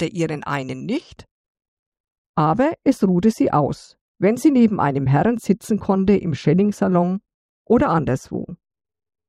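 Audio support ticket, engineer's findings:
De-emphasis applied wrongly from 1.00 s to end: smooth treble roll-off, about 11 dB down at 10 kHz versus 1 kHz. Duplicate or unneeded de-emphasis filter; sound dull, muffled.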